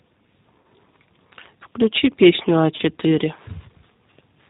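Throughout, the speech carries the signature of the G.729 codec at 8 kbit/s. The decoder rebuilds each short frame from a vocal tract filter, a pitch predictor and a handful of pulses, so everything above 4 kHz is gone and the voice sounds plainly rough and slightly synthetic. Unlike a simple low-pass filter, it adds a grainy, buzzy texture to voiced sounds, not just dullness.

At 0.61 to 0.64 s and again at 2.76 to 2.82 s, VoIP packet loss concealed by the speech codec takes over. About 30 ms of audio is missing each time, which fits a single lost packet. The decoder keeps extending its last pitch and filter at falling gain, so the gap is heard as a short, fading smear of buzzy tone or coloured noise, not silence or a click. That sets it apart from a plain dropout. The level and quality also take a moment to recover after each gap.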